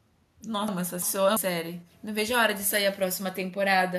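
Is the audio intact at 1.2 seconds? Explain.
No. From 0.68 to 1.37 s the speech sounds jumbled: chunks out of order, where one 0.34 s segment arrives a chunk late and plays after its successor.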